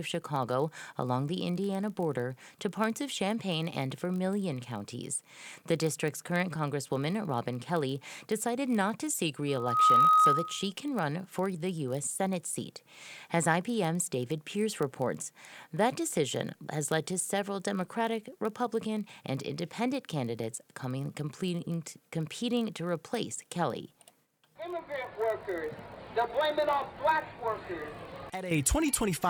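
A block size mismatch (padded) runs through the whole clip. One stage writes blocks slightly shorter than the next stage reads. The remainder of each block is filled with silence. This makes a steady buzz at 46.9 Hz, which fits 1024-sample blocks. The audio runs at 0.999 times normal speed, with timbre unchanged.

From 9.48 to 10.72 s there is loudspeaker feedback squeal. A microphone picks up its own loudspeaker, and the loop gain passes one at 1.3 kHz. That tone swells within about 0.4 seconds. It sits roughly 10 dB above the sound.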